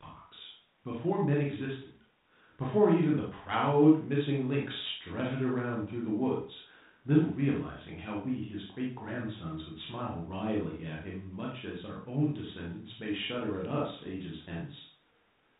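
Speech over a 32 kbit/s G.726 ADPCM path, nothing above 4 kHz and only light coding noise, with no faults to report.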